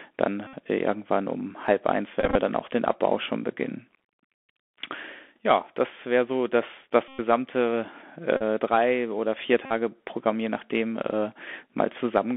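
Throughout, the speech carries the Bluetooth CVSD headset codec, a 64 kbps one-bit scheme that tracks the waveform with an adaptive step. The damage is plainly audible: a granular hiss under the speech, scratchy s sounds, and grit on loud bright passages where the step can't keep up. On a spectrogram the energy sits in a band of about 250 Hz to 3.4 kHz, with nothing above and a fine noisy texture across the band.

Bluetooth headset packet repeated faults break in at 0.47 to 0.55 s, where about 64 ms is lost, and at 2.20 to 2.37 s, where 86 ms of losses are scattered across 150 ms with runs of roughly 20 ms at most. Further repeats fall at 7.08 to 7.21 s (105 ms), 8.37 to 8.42 s (38 ms) and 9.66 to 9.72 s (45 ms). In each, the same few milliseconds are decoded again and again in place of the missing audio, which gives a flat buzz near 267 Hz. The waveform shows one short cycle copied every 3.75 ms, and the spectrogram shows evenly spaced horizontal lines at multiples of 267 Hz.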